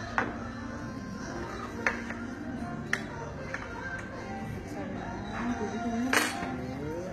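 From start to end, the treble has a bright but false sheen. It sounds gritty and metallic. Sharp, hissy parts of these everyday sounds turn coarse. The likely cause is HE-AAC compression at a very low bitrate, which fits roughly 20 kbps. Only the lower band is properly coded. The upper band is rebuilt by copying lower content upward and shaping it with a rough envelope. Its detail no longer matches what sits below.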